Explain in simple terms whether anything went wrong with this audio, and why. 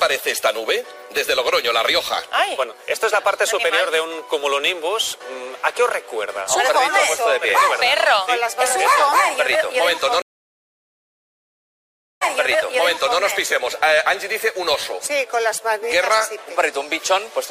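Something did go wrong, at 10.22 seconds. The sound suddenly stops and stays silent for about 2 seconds. This is a stream reconnect. The connection to the source broke, and the player had to reconnect and start decoding again partway through. When the sound returns, it picks up about 1 second earlier than where it stopped. So a short stretch plays twice. The whole disturbance settles by 13.21 seconds.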